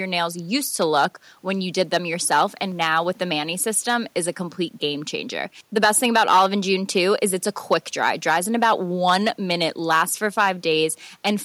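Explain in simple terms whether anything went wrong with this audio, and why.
The loudest moments of the speech sound rough and crackly, as if the sound briefly tears at its peaks, and this happens all the way through the recording rather than at one spot. That is hard clipping: the signal was pushed louder than the recording chain could carry, so the tips of the biggest waves were sliced off flat. Under one percent of the sound is affected, but those flattened peaks add a crackly edge where the sound is loudest.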